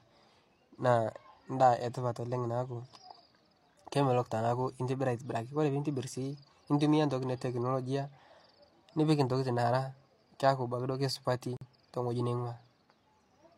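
At 11.57 s the speech drops into a corrupt frame muted gap lasting about 0.1 s, ending at 11.66 s. A damaged compressed frame was rejected by the decoder and replaced with silence, fitting a single lost frame. The waveform shows an abrupt flat stretch, the spectrogram a clean vertical blank band, and the speech resumes on time.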